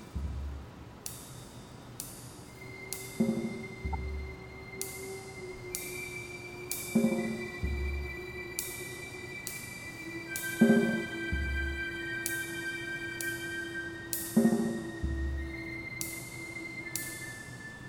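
At 3.93 s a corrupt frame decoded: flipped bits in one frame misplace energy, giving a blip around -25 dBFS, seen as a spectrogram streak.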